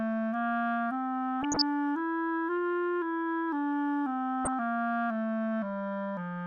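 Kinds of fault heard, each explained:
DAB burbling: bit errors from weak reception corrupt MP2 data, putting short blips of noise in single sub-bands, heard as two bursts at 1.4 and 4.45 s.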